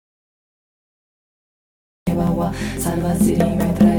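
The audio is already in a dropout to silence at the start and stays dead until 2.07 s. The input was likely lost, leaving plain silence without room tone.

From 2.27 to 3.77 s come periodic USB or driver dropouts. Every 0.5 s a couple of milliseconds are skipped, giving regular ticks.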